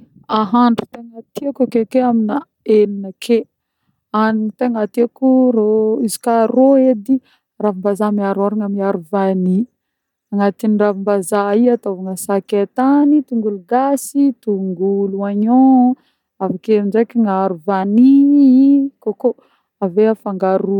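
From 13.03 to 14.02 s and again from 17.83 to 19.39 s, the speech jumps about 5.7% faster and roughly a semitone (96 cents) sharp, then snaps back. This is likely a drift correction step. On a spectrogram the harmonics step upward and return.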